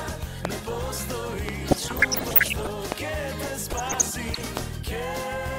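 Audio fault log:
0.45–0.47 s, 1.49–1.51 s, 2.92–2.94 s and 4.57–4.59 s, loud pop: four single, sharp pops, each lasting about 20 ms and peaking about 20 dB above the surrounding sound, which carries on beneath them. Each is a sudden electrical step or spike, likely from a switch, connector or static discharge, that rides on top of the signal. The following circuitry shapes that spike into a brief thump, so it reads as a crack rather than a change in the sound.
1.69–2.69 s and 3.70–4.42 s, DAB burbling: two stretches of burbling over the programme, denser in the first run, where the error rate is about one percent, than in the second, where it is roughly half that. Weak reception lets bit errors slip past the error correction into the compressed audio frames. Corrupted samples put short blips of noise in single sub-bands, and corrupted scale factors make sub-bands jump in level for up to a frame, producing the burbling.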